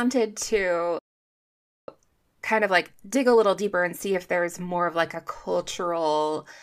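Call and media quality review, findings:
Playback stall, 0.99 to 1.88 s. Speech cuts out mid-flow for about 0.89 s of silence. Likely player buffer underrun or blocked audio thread.

Time-compressed catch-up, 1.88 to 4.88 s, ending just before "of like a". Speech hurried about 1.15x at normal pitch. Player cross-fading out backlog after the stall.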